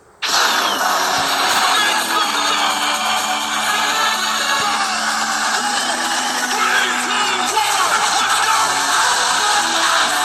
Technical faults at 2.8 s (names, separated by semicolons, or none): none